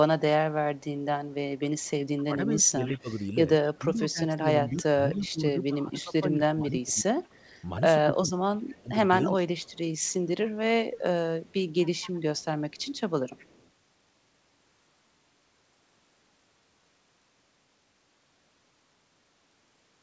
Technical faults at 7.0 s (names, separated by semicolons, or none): speech suppressed in double talk; echo leak